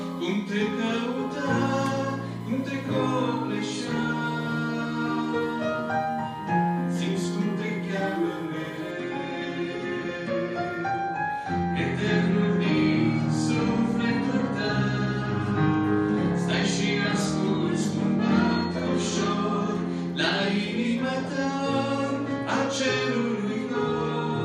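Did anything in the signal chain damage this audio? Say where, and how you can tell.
Yes. A USB whine, a steady fixed-pitch tone at 1 kHz, sits roughly 25 dB below the signal from 0.00 to 8.91 s, then stops. This fault is in the analogue wiring: current drawn in the bus's 1 ms frames leaks through shared power or ground.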